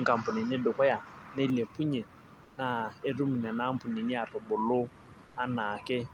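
From 0 to 1.5 s the input was likely switched to a poorer device: the spectrogram shows nothing above 7.6 kHz, the level sits about 5 dB different, and the change is seamless. At 2.43–2.57 s and 5.25–5.35 s, comfort noise likely replaced the background, as with Opus discontinuous transmission. These flat, featureless 140 ms and 100 ms patches are about 3 and 4 dB quieter and appear as smooth, even bands on a spectrogram.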